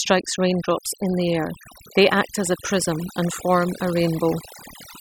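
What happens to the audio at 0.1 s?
At 0.1 s you're hearing overdone noise removal, and it runs through the whole speech clip. The denoiser was pushed too hard, so it's pulling down any frequency band sitting near its noise estimate. That leaves a lowered background broken up into twinkling specks.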